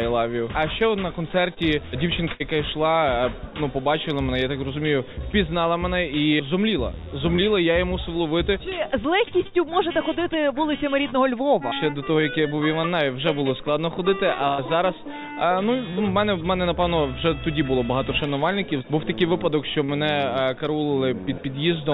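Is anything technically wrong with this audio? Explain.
Yes. There is short concealed packet loss at 1.54 s and 19.84 s: about 24 ms and 41 ms of audio were re-synthesised from the preceding sound, leaving a brief smear or wobble where about 20 ms and 40 ms went missing.

There is also a burst of packet loss at 2.32 s and 14.48 s. Here about 80 ms and 100 ms went missing. Unlike the short losses, the concealment fades into a held buzz or hiss, and the audio resumes further on with a real gap.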